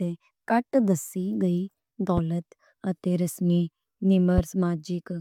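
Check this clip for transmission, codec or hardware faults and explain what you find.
Two loud pops interrupt the speech, at 2.17 to 2.20 s and 4.38 to 4.41 s. Each is a single sharp hit, roughly 10 dB above the speech. A sudden voltage pulse, likely from a plug, switch or static, joins the signal. The speech continues underneath.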